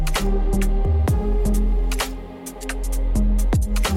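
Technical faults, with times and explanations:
No technical faults are audible, and the signal holds steady with nothing interrupting or disturbing it at any point.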